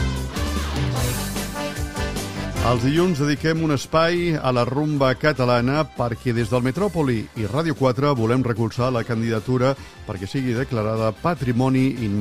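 Nothing here stands out as a technical problem; the audio just sits there sounding the way it should all the way along.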